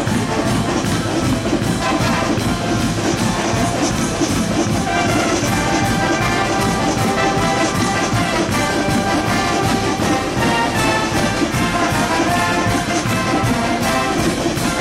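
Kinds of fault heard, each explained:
No technical faults can be heard anywhere in it.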